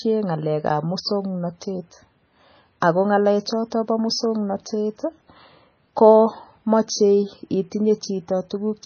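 From start to finish the speech carries the marks of MP3 compression at a very low bitrate, around 18 kbps, and the damage is heavy. Nothing is present above 6.5 kHz, so the treble is cut flat and s sounds lose their bite. Quiet frequency components drop in and out between frames, which gives a watery, swirling texture with metallic chirps on sibilants and smeared consonant attacks. An aggressive low-bitrate MP3 encode is the likely cause.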